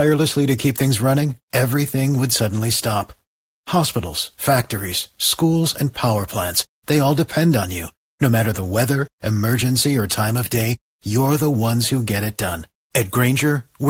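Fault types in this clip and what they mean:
No technical faults can be heard anywhere in the speech recording; the signal stays continuous for its whole duration.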